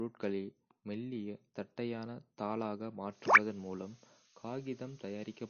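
Speech runs throughout with nothing above 6.6 kHz and a plainly audible watery, swirling texture as weak high components flicker between frames, likely from MP3 compression at a low bitrate around 32 kbps. A simple low-pass filter would dull the top without that swirl.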